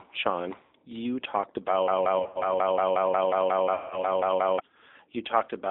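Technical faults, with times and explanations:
throughout: G.729 codec. The audio is confined to roughly 250 Hz to 3.7 kHz and has a plainly audible rough, synthetic texture. Each frame is rebuilt from a filter, a pitch predictor and a few pulses, consistent with G.729A at 8 kbit/s.
0.65–0.72 s, 2.19–2.46 s, 3.74–4.04 s: VoIP packet loss concealed by the speech codec. The first gap, just before "you talked", covers 60 ms. The second, after "you talked", loses 120 ms scattered over 160 ms. The third covers 170 ms. The decoder extrapolates its last pitch and filter into a fading buzzy tone or coloured noise.
1.88–4.60 s: broken-record loop. Just after "you talked", a 180 ms fragment repeats exactly, back to back, 15 times, and the audio meant for that stretch is lost. This points to a likely stall in the player or stream, which kept resending its last buffered piece.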